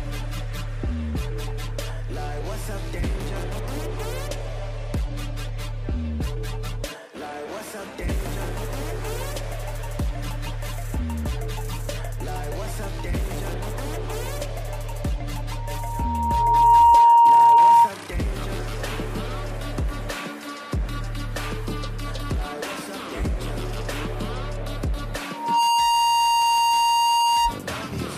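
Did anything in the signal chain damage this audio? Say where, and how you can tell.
Yes. A 935 Hz tone swells into loudspeaker feedback squeal at 15.56–17.92 s and 25.33–27.56 s, well above the signal: the analogue mic-to-speaker loop exceeded unity gain.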